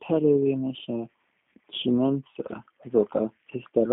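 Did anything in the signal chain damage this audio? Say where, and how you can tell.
Yes, at the codec stage. The speech is rough and synthetic throughout, as a G.729 codec at about 8 kbit/s rebuilds it from pulses. A spectrogram shows nothing above 3.7 kHz.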